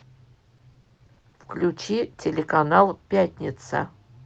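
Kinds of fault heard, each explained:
Repeated packet loss (robotic sound): from 0.57 to 1.60 s, about eleven short holes, none longer than 40 ms, are patched by stretching the preceding sound, so roughly a third of that span is concealed and the sound turns choppy. A single dropout would be one gap, not a choppy run.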